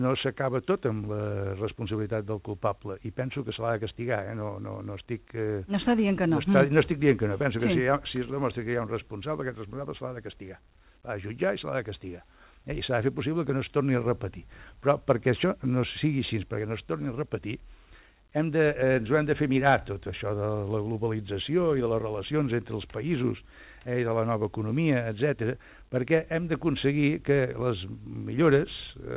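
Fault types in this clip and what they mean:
The audio carries no faults; it arrives through a WebRTC call path whose band limit leaves nothing above 4 kHz, a narrowband character that fits G.711 mu-law at 64 kbps.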